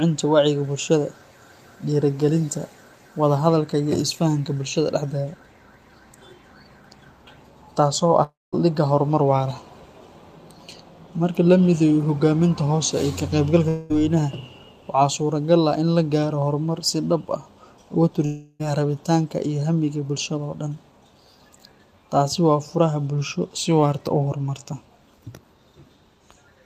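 At 8.23–8.54 s, 13.68–14.00 s and 18.26–18.62 s the speech breaks into a fading buzz, likely a long network dropout. The receiver stretched the last sound to cover the missing audio. On a spectrogram this shows as smeared bands thinning out, with a blank strip of about 0.2 s in the first gap.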